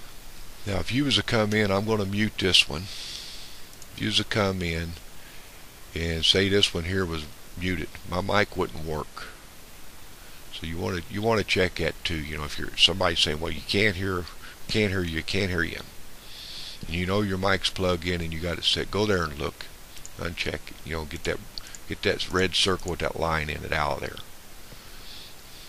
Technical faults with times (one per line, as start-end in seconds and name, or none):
none